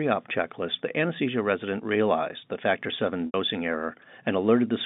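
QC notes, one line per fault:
3.26–3.34 s, packet loss with pitch repetition: about 80 ms of audio drops out, which fits eight 10 ms packets. The receiver loops the last pitch period to bridge the hole, fading it over about 50 ms toward silence before the speech returns through a brief cross-fade, all within the narrow telephone band of the G.711 line.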